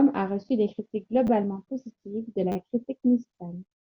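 At 1.27–1.29 s and 2.52–2.56 s, a repeated buffer replays one 10 ms slice two, then four extra times. Each is a brief buzz, showing as regular vertical seams.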